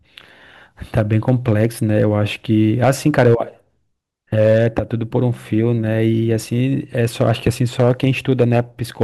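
Hard clipping recurs through the speech: from 0.97 to 2.04 s, 2.83 to 3.35 s, 4.38 to 4.79 s, 6.99 to 8.60 s, and briefly at 9.01 s. In each stretch the signal exceeds what a stage in the chain can pass, by about 3 to 6 dB, so waveform peaks are sheared flat. Those squared-off tops generate high harmonics, heard as a harsh, crackling fuzz on the louder syllables. The 6 dB passages are the roughest.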